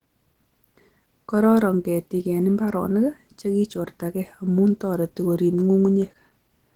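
Throughout the speech, the damage is plain. The sound is hoarse and muffled, with a rough, grainy top end. The likely cause is Opus compression in its hybrid mode, consistent with roughly 16 kbps. Content still reaches about 20.2 kHz.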